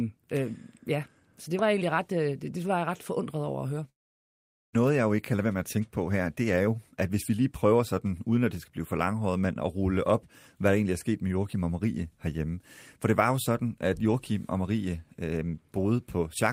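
At 3.89 s the speech breaks off. The last sound trails away as a brief fading buzz, then the line goes essentially silent until 4.75 s. When the speech resumes, about 0.6 s of it is simply missing rather than delayed. This is likely a long network dropout: packets stopped arriving, the receiver briefly concealed the gap by extending the final sound, then gave up. Playback also ends up running roughly a fifth of a second later than before.

Shortly afterwards the speech sounds hurried while keeping its normal pitch, first from 5.33 to 5.78 s at about 109% speed, then from 6.60 to 8.33 s at about 110%. This is jitter buffer speed-up. With audio backed up after the outage, the receiver trimmed many tiny pitch-period slices to catch up, shedding on the order of 50 ms in the first stretch and around 200 ms in the second.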